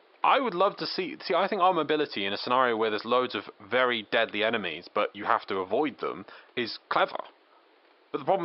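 No technical faults can be heard in this recording.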